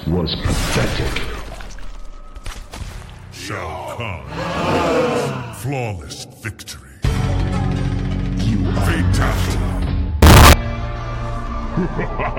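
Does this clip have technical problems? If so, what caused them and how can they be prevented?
Yes. From 10.22 to 10.53 s the audio becomes a harsh, near-square burst at an almost fixed, high level, with the background as loud as the foreground. This is likely a float read as integer fault, with 32-bit float samples interpreted as 32-bit integers. To prevent it, make sure every stage declares and checks the sample format so that float data is never passed where integer data is expected.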